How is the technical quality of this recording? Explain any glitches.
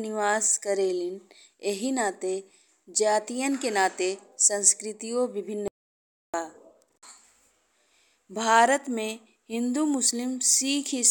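The recording has one clear glitch, an audio dropout to silence. From 5.68 to 6.34 s, the input was likely lost, perhaps through a disconnected device, a failed link or a stray mute, while recording carried on writing silence. The speech cuts out mid-flow for about 0.66 s, leaving dead silence with no room tone, then resumes abruptly.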